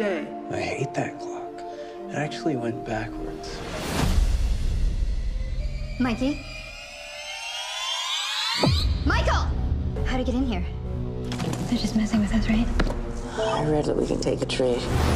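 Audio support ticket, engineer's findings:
Section at the wrong speed, 5.60 s to end (15.15 s). Audio abruptly higher and hurried, pitch up about two semitones, tempo up to match. Playback at 1.12x, speed and pitch shifting together. Likely cause: editor or player resampling this segment against the wrong clock.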